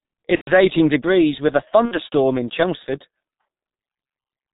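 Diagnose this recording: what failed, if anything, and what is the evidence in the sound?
G.723.1 codec throughout, at the codec stage. The speech is muffled and hoarse, with nothing above 4 kHz and smeared consonants. Heavy damage from a slowly updated vocal model in 30 ms frames points to the higher-rate mode, around 6.3 kbit/s.

VoIP packet loss concealed by the speech codec, at 0.35–0.52 s, just before "eighteen degrees with a", and at 1.86–1.95 s, right after it. This is a network fault. The decoder filled the gaps, about 120 ms (fitting four 30 ms frames) and 60 ms, by stretching its last pitch and filter into a fading buzzy or noisy sound, muting the longer gap from its third lost frame. The sound stays weak briefly afterwards.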